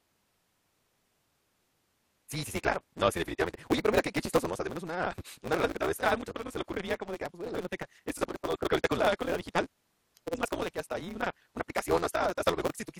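A speech recording with a block size mismatch, truncated, running through the whole clip. A steady 172 Hz buzz sits under everything. The speech runs about 1.88 times fast at near-normal pitch. Each block's tail is discarded, which fits 256-sample reads.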